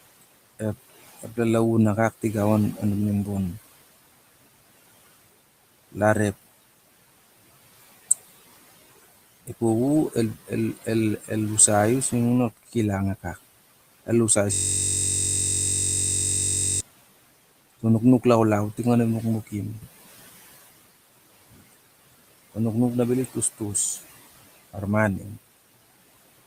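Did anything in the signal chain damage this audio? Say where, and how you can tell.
Yes. From 14.54 s to 16.81 s a system hang loop takes over at the driver or buffer stage. The host stalled while the audio hardware kept replaying one 21.33 ms slice of its ring buffer, which fits a 1024-sample buffer. Repeating roughly a hundred times, it comes out as a steady buzz at 46.9 Hz rather than as speech. On a waveform the section is an exact periodic tile. A spectrogram shows harmonic stripes spaced 46.9 Hz apart, frozen in time.

Throughout the clip, the call-processing stage adds noise suppressor artifacts. The room noise sits about 20 dB below the speech, and the suppressor pulls it down by about 17 dB frame by frame. You can hear the background drop away in the pauses and come back up under the speech. On a spectrogram the noise floor pumps in step with the speech.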